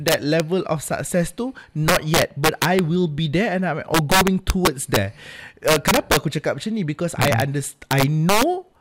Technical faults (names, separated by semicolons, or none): integer overflow